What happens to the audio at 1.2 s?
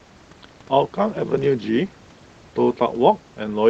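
At 1.2 s the speech carries on intact, with no dropout, glitch or other fault at that moment.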